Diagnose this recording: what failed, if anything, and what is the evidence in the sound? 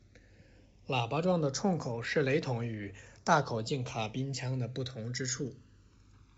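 The fault is channels drifting apart, at the converter stage. The left and right channels of this speech were captured by devices running on separate sample clocks, with a mismatch of roughly 200 ppm. The interchannel delay grows steadily across the clip to under a millisecond by the end. In a mono sum, the comb-filter notches sweep slowly downward and give a gradual flanging colour, heard over the wideband telephone coding with its light upper-band hiss and nothing above about 7.7 kHz.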